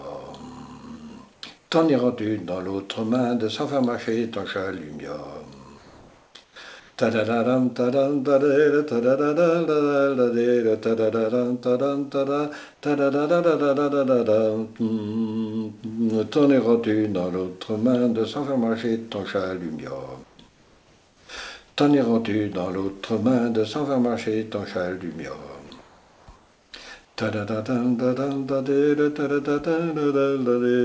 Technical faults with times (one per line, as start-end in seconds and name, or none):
1.34-1.70 comfort noise in place of the background
5.78-6.98 comfort noise in place of the background
20.24-21.29 comfort noise in place of the background
21.68-21.77 comfort noise in place of the background
25.67-25.70 sound dropped by the voice detector
25.67-26.72 comfort noise in place of the background
27.05-27.17 comfort noise in place of the background